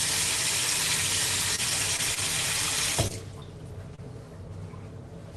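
From 1.55 to 2.19 s there is repeated packet loss (robotic sound): four dropouts, the longest 26 ms, are each patched by extending the preceding sound, so about 11% of that span is synthetic fill. The result is a choppy texture with fragments missing.

Short concealed packet loss follows at 3.07 to 3.12 s, 3.40 to 3.43 s and 3.95 to 4.00 s. In each, roughly 20 ms of audio never arrived in time, and the receiver bridged it by continuing the last sound before blending back in. This leaves a brief smear or wobble. Through the Opus call path, content stops at 12 kHz.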